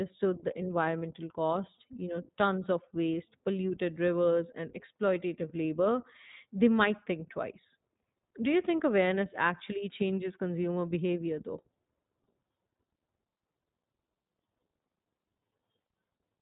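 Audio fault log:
throughout, iLBC codec: the speech has that clear but slightly rough, synthetic edge of a narrowband VoIP codec, and the damage is plainly audible. Nothing above 3.8 kHz survives, so sibilants and breathiness sound dull and boxy. Each short frame's excitation is coded on its own, with no help from the frame before, which gives a grainy texture that fits 20 ms frames at around 15 kbps.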